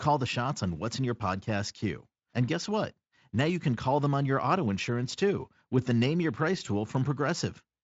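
No technical faults are audible.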